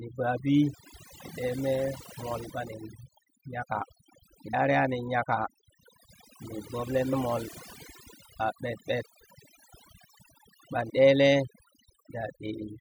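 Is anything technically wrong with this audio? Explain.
Yes. Overdone noise removal runs throughout: bands near the estimated noise floor are gated off, so quiet parts of the speech go with them over twinkling silence. A spectrogram shows scattered isolated specks.

Compressed frames are skipped at 2.49, 4.53, 7.12, 8.39 and 10.89 s, jumping ahead in 24 ms frame steps: roughly 70 to 100 ms each, about 300 ms at 10.89 s. Each splice is a sudden join, visible as a waveform discontinuity.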